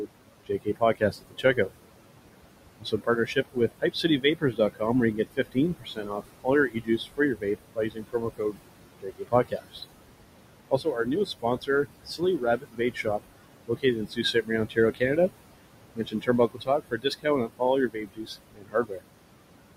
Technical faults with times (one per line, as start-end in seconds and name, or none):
0.00-19.76 noise suppressor artifacts
0.46-1.58 speech cut by the noise suppressor
2.80-4.82 speech cut by the noise suppressor
5.13-8.58 speech cut by the noise suppressor
9.02-9.81 speech cut by the noise suppressor
10.70-13.25 speech cut by the noise suppressor
13.67-15.18 speech cut by the noise suppressor
15.95-19.03 speech cut by the noise suppressor